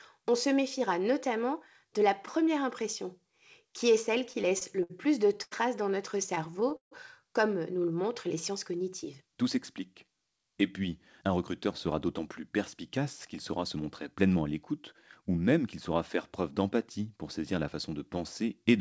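Speech passed through a call link, with the spectrum empty above 8 kHz, which fits a wideband call codec. Repeated stalls (stutter) occur from 4.18 to 4.92 s and from 6.17 to 6.93 s. Packets arrived late and the jitter buffer kept running dry, so the receiver extended the last sound through seven and then eight short gaps, totalling 136 ms and 219 ms. The longest gap lasts 149 ms. On a spectrogram these appear as smeared, repeated harmonic columns, and the longer ones fade out in the waveform. A short stall from a late packet at 5.43 to 5.53 s holds one sound for 88 ms while the receiver waits for the missing packet. This shows as a frozen, slightly dipping stretch of identical spectral slices before the speech resumes from where it stopped. A jitter buffer slow-down from 7.82 to 9.23 s plays the speech at 94% speed, adding 97 ms by repeating single pitch periods. The pitch is unchanged, but the harmonics stretch sideways and waveform cycles repeat visibly. 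Jitter buffer speed-up runs at 107% from 11.23 to 12.41 s, removing about 100 ms, and at 109% from 13.77 to 15.77 s, removing about 200 ms. The receiver cut out pitch periods to shrink its backlog, so the speech sounds hurried and syllables look compressed along the time axis.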